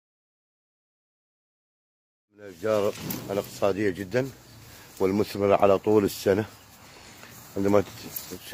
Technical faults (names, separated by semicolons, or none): none